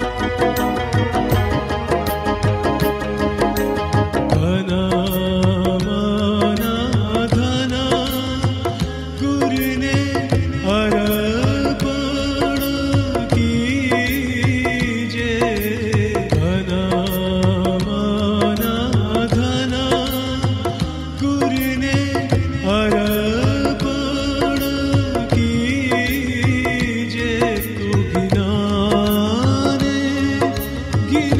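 Nothing here catches the ear as a technical fault, so there's no problem to point out anywhere along the way.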